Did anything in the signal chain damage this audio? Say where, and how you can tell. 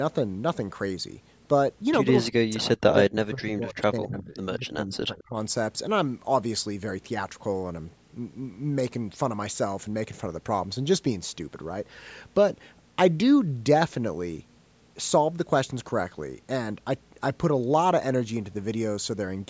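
Yes: the call's echo canceller likely mistook overlapping speech for echo, causing speech suppressed in double talk. The speech dips by about 35 dB from 2.19 to 4.39 s and from 4.58 to 5.36 s.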